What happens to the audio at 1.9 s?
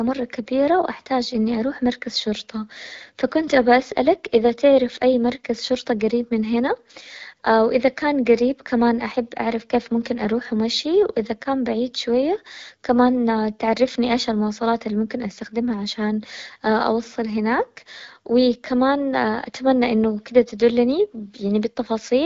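Nothing goes wrong at 1.9 s: the speech there is intact, carried through the AMR wideband (HD Voice) codec at 12.65 kbit/s with no fault at that moment.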